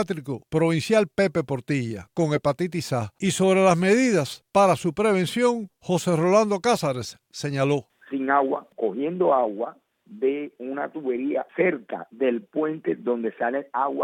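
Nothing here stands out as a technical fault; the audio just runs along without any glitch, dropout or distortion catching the ear.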